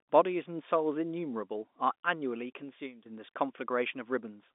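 From 1.25 s to 3.09 s a loudspeaker feedback squeal builds over roughly a second and a half into a piercing 6.1 kHz tone about 10 dB above the speech. Unlike a steady interfering whistle, it swells on its own as the microphone-to-speaker loop runs away.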